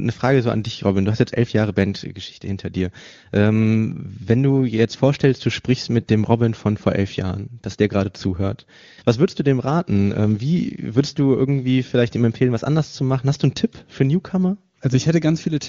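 No technical faults are audible in this speech recording.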